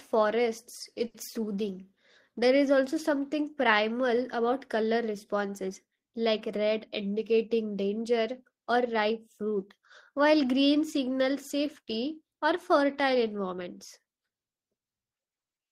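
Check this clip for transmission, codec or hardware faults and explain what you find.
Two jitter-buffer faults affect this speech clip: one stall and one speed-up.

At 1.07 to 1.17 s there is a short stall from a late packet. The receiver stretched the last sound for 70 ms until the packet arrived, so the sound is held with a faint buzz or dip. On a spectrogram the harmonics freeze into flat bands, and the waveform shows repeated identical cycles.

At 13.23 to 13.68 s, just after "signals safety or fertile", there is a jitter buffer speed-up. Pitch-period snippets totalling about 50 ms were cut out, so playback runs at 109% speed and sounds hurried at unchanged pitch. A spectrogram shows normal harmonic spacing with syllables squeezed in time.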